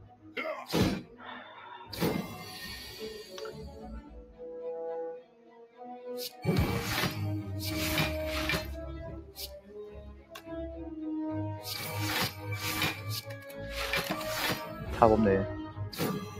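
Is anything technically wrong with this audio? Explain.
Yes. A noise suppressor designed for speech was left running on this audio, and it treats steady tones and decaying ambience as noise. Throughout the clip, level swings by about 10 dB as held material is pulled down while attacks pass, so the sound pumps and thins.

Sound cut by the noise suppressor occurs at 0.0–0.37 s (about 14 dB), 1.03–1.24 s (about 8 dB), 4.01–4.42 s (about 11 dB), 5.2–6.07 s (about 14 dB), 6.29–6.44 s (about 8 dB) and 9.21–10.5 s (about 13 dB). In each, the suppressor judged sustained or fading content as noise and ducked it, so those passages sag and their tails are clipped short.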